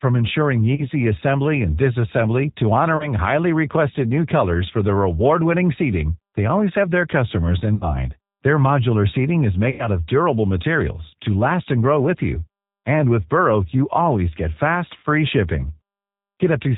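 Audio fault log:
throughout G.729 codec: speech is rebuilt at 8 kbit/s from a vocal tract filter, pitch predictor and sparse pulses, so it sounds plainly rough and synthetic, with nothing above 4 kHz.
0.75–0.86 s (just before "assembly and disassembly to"), 2.97–3.11 s (between "assembly and disassembly to" and "highly requested new colors"), 7.75–7.86 s, 9.70–9.89 s, 14.97–15.04 s (after "you always get fast") VoIP packet loss concealed by the speech codec: gaps of 30, 30, 60, 90 and 60 ms are bridged by extrapolating the last pitch and filter. The result is a fading buzzy tone or coloured noise, with weak, distorted speech lingering briefly afterwards.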